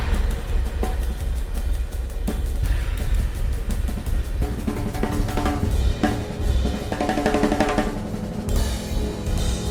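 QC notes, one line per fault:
4.21 to 4.25 s, short concealed packet loss: about 20 ms of audio never reached the decoder in time, and the receiver filled the gap by extending the preceding sound, continuing its pitch if periodic or substituting shaped noise if not, before blending back into the received signal. That 20 ms of synthesized fill and the crossfade out of it are heard as a brief smear or wobble at this point.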